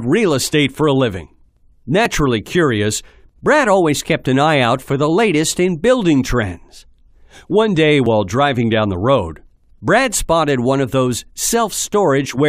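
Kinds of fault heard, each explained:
Overlap between stream segments: two adjacent segments claim the same stretch of time, so the player trims that shared part away even though the sound was never doubled. Here a sliver of about 10 to 20 ms vanishes at 2.06 s and again at 8.06 s, six seconds apart, matching a 6-second segment length. Each is heard as a brief click or skip. The waveform shows an abrupt step, and the spectrogram a thin vertical broadband line.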